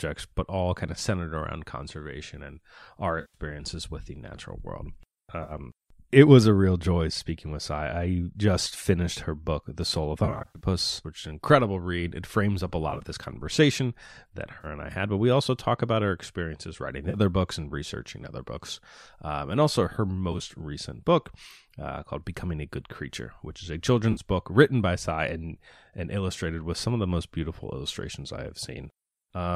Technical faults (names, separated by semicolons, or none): AAC frame loss with concealment